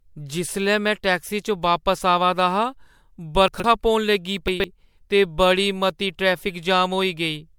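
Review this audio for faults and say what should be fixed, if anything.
Throughout the speech, the sound is swirly, smeared and hollow, with blurred consonant attacks. This is likely generation loss from MP3 being re-encoded about four times, consistent with around 96 kbit/s. Keep a lossless master and encode once, at the end.

From 3.48 to 3.64 s, just before "पौन लगी", and again from 4.48 to 4.64 s, between "पौन लगी" and "ते बड़ी मती", there is a jumbled moment. These are chunks out of order: a 40 ms chunk plays three chunks late, leaving hard joins. Order chunks by sequence number or timestamp before writing or playback.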